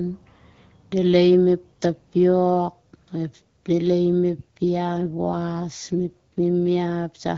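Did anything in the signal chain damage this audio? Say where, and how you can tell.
Yes. AMR rate drop at the network/codec stage, 4.92 to 6.52 s: the speech turns rougher and more synthetic without a gap or any change in bandwidth, which fits a step from 12.65 to 8.85 kbit/s.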